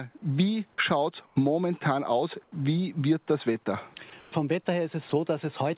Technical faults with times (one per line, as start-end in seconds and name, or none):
1.26-1.36 comfort noise in place of the background
2.44-2.52 comfort noise in place of the background
3.64-3.66 sound dropped by the voice detector
4.10-4.12 sound dropped by the voice detector
4.20-4.32 comfort noise in place of the background
5.10-5.12 sound dropped by the voice detector